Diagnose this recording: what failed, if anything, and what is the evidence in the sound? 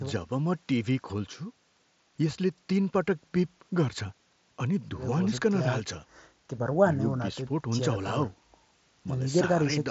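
Nothing failed: the speech comes through a Bluetooth mSBC headset codec working as designed, with bandwidth stopping at 8 kHz and only a light grain on the louder syllables, as expected for that wideband link.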